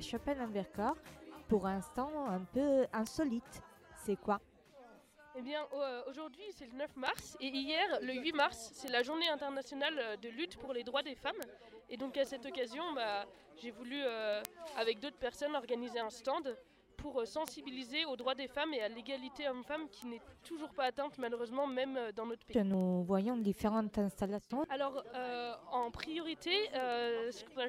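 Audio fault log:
0.17–27.65 s, word clock ticks: a steady stream of sharp ticks of uneven strength, arriving roughly ten times a second. The receiving device is running on its own clock instead of locking to the digital link's clock, and the two drift apart by something in the region of 200 parts per million. Each time they slip past each other, a single sample is dropped or repeated, leaving a tiny discontinuity that is heard as a tick.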